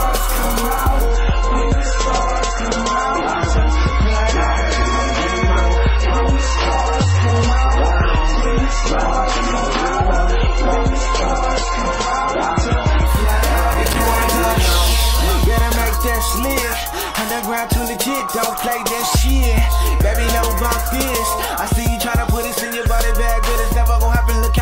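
Right from 1.06 s the audio suddenly loses its top end and picks up that swirly codec texture. Everything above 8 kHz is gone until 13.06 s, when full quality snaps back with no gap. That's an adaptive stream at a lower bitrate: the player dropped to a cheaper version while the connection struggled. The sound fits something like a 23 kbit/s MP3 standing in for a 128 kbit/s one. Shortly after that, there's processor overload crackle, a short gritty tearing from 13.72 to 13.99 s and again, longer, from 18.20 to 18.86 s. Each burst is a string of tiny hard-edged dropouts where the processor missed buffer deadlines in a row and silence filled each slot. The spacing points to buffers of roughly 5 ms, with around ten missed in the first burst and maybe seven in the second, so the crackle sits on the sound only while the load lasts.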